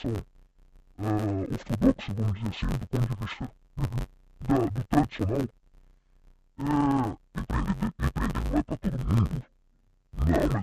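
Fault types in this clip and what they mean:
Interleaved audio read as planar: The speech sounds dull and robotic throughout, with a steady buzz near 94 Hz and no clear drop in pitch. Each block of about 10.67 ms holds alternating left and right samples, but its first half is played as left and its second half as right, so each channel runs at half speed inside every block. Blocks this short, which fits a 512-sample buffer, give a buzz at the block rate rather than an octave shift.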